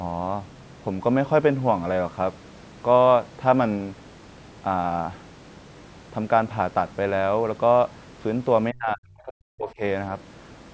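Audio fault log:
8.71–9.82 s, speech suppressed in double talk: the speech level falls away sharply, reaching a drop of roughly 40 dB at its deepest, with the affected stretches adding up to about a second. The likely cause is an echo canceller that could not separate near-end speech from loudspeaker echo while both ends were talking, so it attenuated the whole signal. The audio carries call microphone processing, with nothing above 8 kHz.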